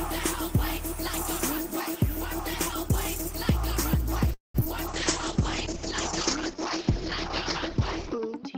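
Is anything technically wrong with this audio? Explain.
Yes. Four network-related faults occur in the second half of the clip.

From 4.33 to 4.63 s there is what is likely a long network dropout. The receiver extends the last sound as a decaying fill for most of the gap. About 160 ms of that stretch is silence, and about 60 ms of the original audio never returns. When playback resumes, the delay has grown by roughly 150 ms, so the sound picks up later than it would have without the interruption.

At 4.65 s a short concealed packet loss follows. About 40 ms of audio failed to reach the decoder in time. Almost none of it was synthesised, so the hole is covered only briefly before the real audio blends back in. The result is a quick smear or skip, and the playout delay shrinks by roughly 40 ms.

At 4.89 s a call bitrate drop begins and runs to the end of the clip. The encoder falls from 32 kbps to 9 kbps and stays at that lowest rate for about 3.3 s. 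Audio bandwidth narrows from 20 kHz to 6 kHz, which takes off the upper frequencies, and the coarser coding makes the sound rougher. The bitrate does not recover before the clip ends.

From 7.70 to 8.40 s a jitter buffer slow-down overlaps the low-bitrate section. To rebuild its reserve, the receiver repeats short pitch periods or pause fragments. This adds 53 ms and plays that stretch at 93% speed. Sounds are drawn out while the pitch stays the same.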